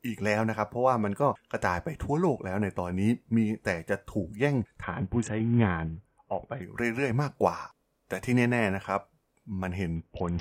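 A Bluetooth SBC bit pool drop hits at 4.83 to 6.62 s and again from 9.96 s to the end: the link's encoding rate falls, consistent with roughly 55 kbps, starving the upper sub-bands, so the treble dulls and gritty noise rises.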